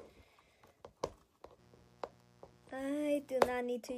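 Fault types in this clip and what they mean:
Mains buzz: a raspy, steady buzz comes in around 1.56 s and stays until about 3.48 s. It's a 60 Hz system, so spiky interference from something like a dimmer or poor shielding stacks up harmonics well into the kHz range, sitting roughly 30 dB under the main sound.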